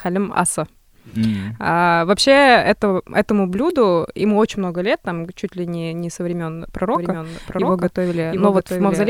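A doubled audio track appears in this speech clip from 6.95 s to the end, most likely because the same signal reached the mix twice, once directly and once through a slower path or an edit that left two copies out of step. The second copy trails the first by around 0.7 s and sits roughly 5 dB quieter. It is full-band and dry, with no decay or room colour, and it cuts in abruptly, so everything after that point is followed by a distinct, clean repeat.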